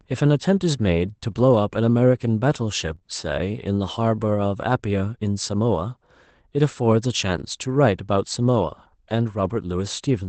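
Brief rough, noisier patches at 1.31 to 1.37 s and 2.87 to 2.93 s: a lost packet rebuilt from error correction, where the decoder played a low-bitrate backup copy of about 40 ms of speech instead of leaving a gap. Right after, at 2.95 to 3.03 s, two back-to-back smeared, wobbly moments come from short concealed packet loss, with the receiver extending the preceding sound to cover each missing 20 ms. The same rougher, noisier quality returns at 7.35 to 7.41 s for about 40 ms and at 9.41 to 9.51 s for about 60 ms, again rebuilt from error correction. The call path's band limit near 8 kHz is audible throughout, consistent with Opus at around 24 kbps.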